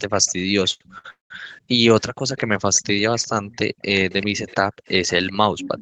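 Speech carries a delayed copy of itself arriving about 0.39 s after the original, from 0.00 to 1.51 s at about 30 dB below the voice, from 2.38 to 3.58 s at about 25 dB below, and from 4.11 to 5.81 s at about 15 dB below. This is likely an echo leak, with the far side's loudspeaker feeding a microphone whose echo canceller let residue through. The fixed lag sets it apart from room reverberation, which smears continuously rather than repeating at one offset. Two short stalls from late packets hold the sound too long at 0.73 to 0.82 s (69 ms stretched) and 0.98 to 1.06 s (60 ms). The jitter buffer ran dry and then resumed without losing anything. From 1.10 to 1.32 s a call audio freeze holds the sound for 199 ms, including 140 ms of silence, likely from packets delayed in transit. Its length and the silence distinguish it from the brief stalls. Between 1.59 and 2.27 s and again between 3.70 and 4.87 s, the background is gated by the echo canceller. 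The room sound drops by as much as about 40 dB for roughly a third of a second and then under half a second in total.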